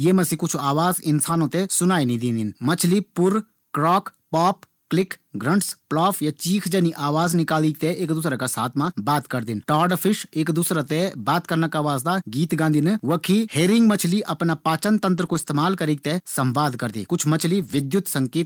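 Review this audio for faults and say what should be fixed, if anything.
Packets were lost in transit, and each time the decoder filled the hole from the low-bitrate copy carried in the next packet. This lost packet rebuilt from error correction occurs at 1.29–1.35, 5.01–5.11, 7.23–7.33, 8.85–8.91, 10.85, 15.17–15.47 and 17.59–17.85 s. No gap is heard, but each rebuilt stretch of speech, lasting 20 to 160 ms, sounds rougher and noisier than its surroundings. Cutting packet loss on the network path, for example with a steadier, less congested connection, would prevent it.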